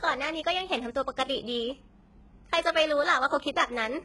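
Throughout the speech, the treble sounds synthetic. Sibilants come out gritty and metallic, with a lisping edge. Nothing reaches above about 11.5 kHz. The upper band is present but does not sound like the real voice. Its harmonics fail to line up with the lower ones. This points to HE-AAC compression, likely at a very low bitrate near 12 kbps. The codec kept only the lower spectrum and rebuilt the top by copying bands upward.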